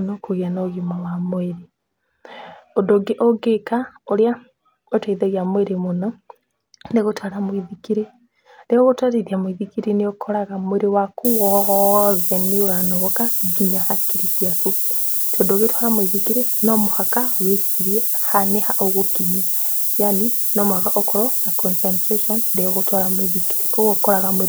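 From 11.25 s to the end, the speech drops to low bit depth with noise shaping. At about 4 bits, the rounding error gets pushed upward in frequency, leaving a steady, thin hiss that climbs toward the top of the band and sits roughly as loud as the speech.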